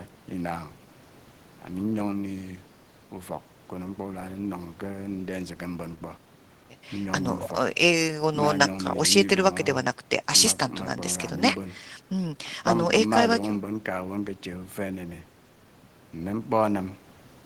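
No technical faults are audible anywhere in this speech recording.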